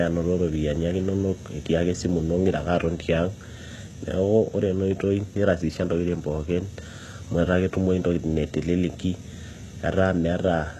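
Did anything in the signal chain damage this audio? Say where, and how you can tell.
Yes. Throughout the speech the treble sounds bright but synthetic, with sibilants turning gritty and lispy, and nothing at all above about 12.3 kHz. That points to the codec stage, likely HE-AAC compression at a low rate, in keeping with something near 16 kbps. Only the lower band is truly coded. The upper band is rebuilt by copying lower bands upward under a coarse envelope, so its harmonics fail to line up with the real ones.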